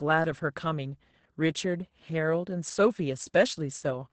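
This speech clip carries Opus voice compression throughout. Nothing is present above 8.7 kHz, so the sound is muffled. The linear-prediction coder renders the excitation coarsely, leaving the speech hoarse and slightly robotic. The heavy damage fits a bitrate near 10 kbps.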